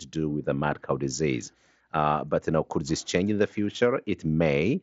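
The clip is speech carried over a Bluetooth mSBC headset link, and nothing is technically wrong with it.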